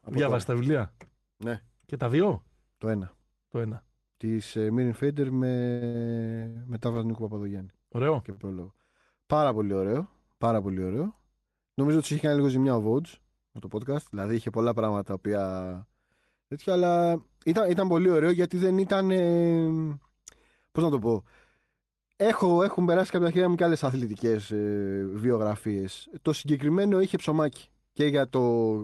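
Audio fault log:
5.71–6.84 s, repeated stalls (stutter): The sound catches four times in quick succession. Packets arrived late, so the jitter buffer ran dry each time. The receiver held the last sound going until data came in. About 253 ms was filled this way, nearly a quarter of the span. The longest gap was 99 ms. Nothing is lost. The passage drags and stutters.
8.32–8.40 s, short stall from a late packet: One packet was missing when it was due. The buffer emptied, and the receiver stretched the last sound for 52 ms. When the packet arrived, playback resumed from the same point. Nothing is skipped. One sound is held slightly too long, with a faint buzz or dip. The delay after this point is 52 ms longer.
13.20–13.85 s and 23.46–24.53 s, jitter buffer speed-up: The buffer held more audio than its target. To reduce the delay, the receiver cut many tiny pitch-period slices in a row. The first stretch runs at 107% speed and drops about 50 ms. 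The second starts right after "έχουν περάσει κάποια", runs at 105% and drops about 70 ms. Pitch stays the same, but the delivery sounds briefly hurried.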